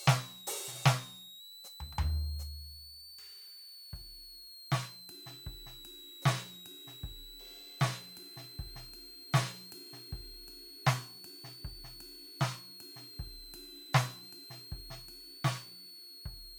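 A switching supply whistle sits under the music from start to finish. It is a thin, high tone near 4 kHz. Its pitch wanders between about 3.7 kHz and 4.5 kHz. The level is fairly strong, roughly 15 dB below the music. A switching power supply in the chain is cycling in an audible burst mode or beating with another one, and its pitch moves as the load on it changes.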